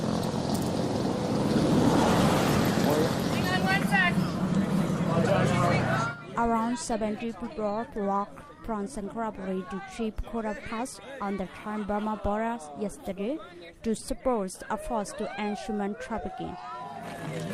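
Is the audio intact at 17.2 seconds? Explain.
Yes, the audio at 17.2 seconds plays through cleanly, with no dropout, click, distortion or other fault at that moment.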